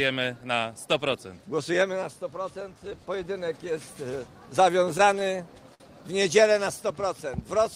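Between 4.64 and 5.83 s, packets reached the receiver late or slower than they were being played, so its jitter buffer kept running dry: the audio shows repeated stalls (stutter), eight short gaps in that span. Each gap was bridged by extending the last sound, about 120 ms in total and about 10% of the span, the longest run near 56 ms. Nothing is lost, but the audio hesitates and drags unevenly through that stretch.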